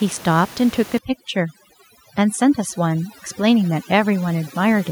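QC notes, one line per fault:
0.98–4.91 s, overdone noise removal: from just under a second in to the end, the background drops and breaks up into twinkling specks. A noise reduction stage set far too aggressively is cutting individual frequency bands whenever they sit close to its noise estimate. Quiet components of the speech fall into that range and get pulled out too, and the room noise, which sits about 17 dB below the speech before 0.98 s, drops away.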